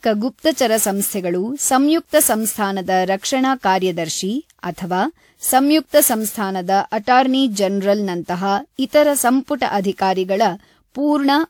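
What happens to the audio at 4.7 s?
At 4.7 s the speech has generation loss, present throughout the clip. It sounds swirly, smeared and hollow. Attacks blur. The likely cause is around seven lossy re-encodes. Each pass re-quantises on a shifted frame grid, so noise and spectral holes accumulate.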